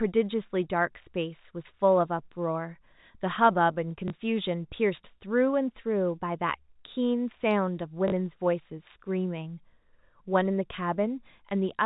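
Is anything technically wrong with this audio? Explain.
Yes. Packet loss with the last packet repeated occurs at 4.08 to 4.10 s and again at 8.08 to 8.12 s. Audio went missing in transit and the receiver filled each gap by replaying the most recent packet. The first gap lasts 20 ms, which fits a single lost 20 ms packet. The second lasts 40 ms, consistent with two. Each repeat ignores the pitch cycle, and the longer gap gives a brief robotic stutter with a buzz near 50 Hz. The underlying G.711 telephone coding can be heard in the narrow band that stops at 4 kHz.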